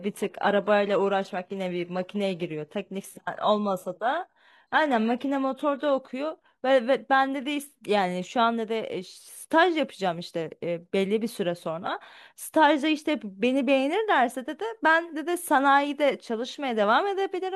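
From 0.0 to 6.0 s the speech shows an adaptive stream starting at a low bitrate: the player opened on a heavily compressed version to begin quickly, then switched up once it had gauged the connection. Early on, the treble sounds synthetic and codec smearing is strong, which fits HE-AAC near 16 kbit/s. At 6.0 s the sound turns clearer and fuller at once, with no gap, consistent with AAC-LC around 96 kbit/s.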